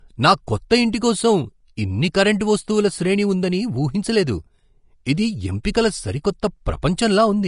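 Throughout the speech nothing sounds above 10.6 kHz, and the upper band that remains is hissy and grainy, with roughened sibilants and softened consonant onsets. This is likely Vorbis compression at a low setting, which fits a bitrate around 36 kbps. The codec lowers the cut-off and quantises the treble residue so coarsely that detail turns into noise of similar energy. Unlike broadband background hiss, this grain follows the signal. It swells with the speech and disappears in the pauses.

Pre-echo occurs at 5.63 s, 5.74 s and 6.82 s. At each point a short hiss, lasting 10 to 15 ms, comes just before a sharp onset, and that attack sounds smeared. The codec spreads the quantisation noise it sized for the loud attack across the whole transform block, so the noise also fills the quiet moment that comes before it. A click would sit on the transient itself, but pre-echo comes before it, and the attack it precedes is blurred rather than marked by a pop.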